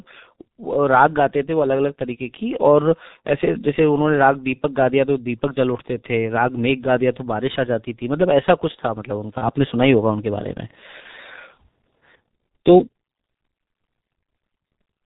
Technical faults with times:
0.00-15.06 G.723.1 codec
9.38-9.50 VoIP packet loss concealed by the speech codec
11.00-11.06 VoIP packet loss concealed by the speech codec

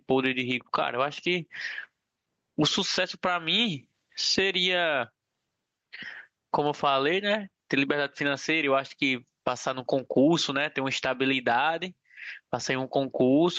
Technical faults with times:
0.00-13.58 gain pumping

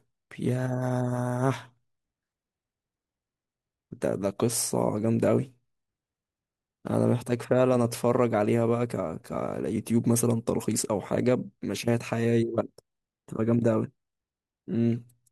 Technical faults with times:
none

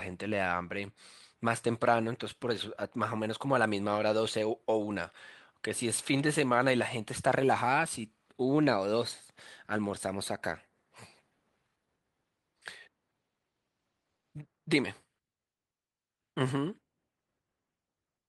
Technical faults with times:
none

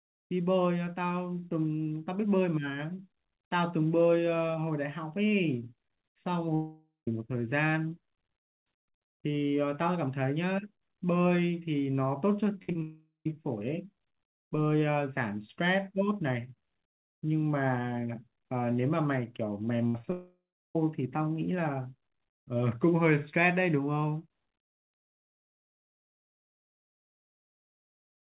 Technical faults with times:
6.55-7.08 long network dropout
12.63-12.82 repeated packet loss (robotic sound)
12.82-13.26 long network dropout
19.87-20.12 repeated packet loss (robotic sound)
20.12-20.76 long network dropout

